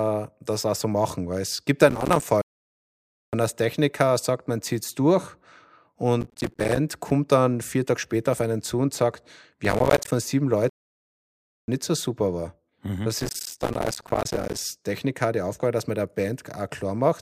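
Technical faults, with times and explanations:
1.90–2.23 s, 6.21–6.77 s (just before "kommt dann vier"), 9.65–10.12 s (right after "einen zu und sagt") and 13.20–14.58 s, processor overload crackle: the speech gets a gritty, tearing crackle laid over it in each of these stretches. The processor keeps missing its deadlines on tiny buffers of around 5 ms, and each missed one drops out to silence with hard edges. Dozens of them in a row, and well over a hundred in the long last burst, blur into that crackle until the load eases.
2.42–3.33 s and 10.69–11.68 s (the second right before "nicht so super war"), playback stall: the speech cuts out mid-flow and goes dead silent for about 0.91 s the first time and about 0.99 s the second, then picks up again. That's far too long to be a single glitch. It's likely the player ran dry of data or its thread got blocked, so nothing reached the output until it recovered.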